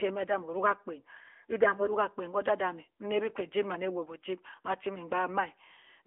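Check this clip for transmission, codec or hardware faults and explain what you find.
The whole clip has been through an AMR narrowband mobile codec, the AMR-NB speech coder used on 2G and 3G calls. It sits in a phone-line band of about 300 Hz to 3.4 kHz with nothing above 3.5 kHz, so the speech sounds boxed-in and dull. The coder rebuilds each short frame from a vocal-tract model fed by a handful of pulses. The damage is plainly audible as a buzzy, synthetic edge, which fits an upper-rate mode of around 10.2 kbps.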